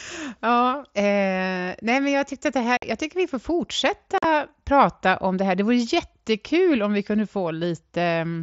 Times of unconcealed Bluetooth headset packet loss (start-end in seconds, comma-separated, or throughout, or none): 2.77-2.83, 4.18-4.24